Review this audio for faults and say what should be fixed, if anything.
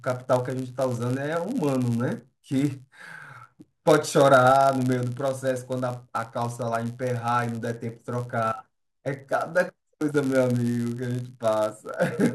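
Block size mismatch (padded), present throughout the speech. A steady buzz at 99.6 Hz sits under the whole clip. One stage hands over blocks slightly shorter than the next stage expects, and the missing samples are filled with zeros. That tiny silent gap, repeated every block, produces the buzz at the block rate, which fits blocks of about 10 ms. The padding also stretches playback to 0.996 times normal speed while pitch stays essentially unchanged. To prevent it, make every stage in the chain agree on one block size, or buffer between stages instead of padding short blocks with zeros.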